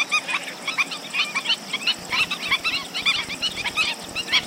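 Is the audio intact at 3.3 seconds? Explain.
No. At 3.3 seconds the audio is under a train of clicks running from 1.99 to 4.44 s. Short pulses of much the same shape arrive about 14.3 times per second, unevenly spaced, some forty in all. They peak about 5 dB above the sound. They are likely interference or a faulty connection or power supply. They are heard as irregular ticking laid over the audio.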